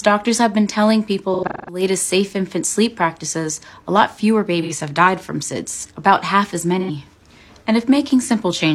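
AAC frame loss with concealment hits at 1.33 to 1.82 s, 4.61 to 4.72 s and 6.79 to 6.90 s. The decoder rebuilds dropped frames from old spectrum, leaving smeared, phasey patches.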